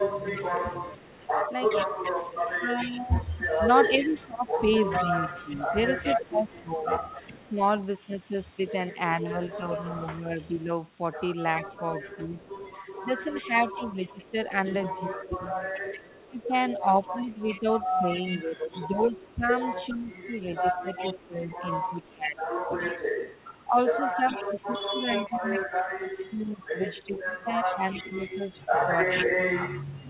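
From 0.0 to 0.82 s, and again from 2.56 to 7.52 s and from 9.67 s to the end, the speech dips by up to about 15 dB in patches. This is speech suppressed in double talk, likely an echo canceller turning down the near talker while the far side speaks. It sounds like gaps and ducking, not like added sound.

Over 0.26 to 7.5 s and 9.51 to 30.05 s, a copy of the voice trails 414 ms behind at about 15 dB below the speech. This is an echo leak, likely from a loudspeaker echo that was only partly cancelled. Unlike the suppression, it adds a delayed second voice.

Throughout, the G.711 call audio is bandlimited at 4 kHz.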